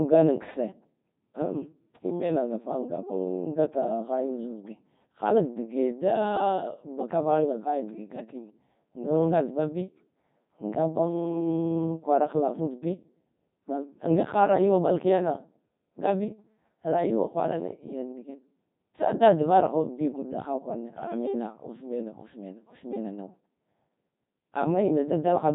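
Throughout, the speech passes through a Codec 2 vocoder. Rebuilt from sine waves, it sounds robotic and buzzy, which fits about 2.4 kbit/s. Nothing remains above 3.8 kHz.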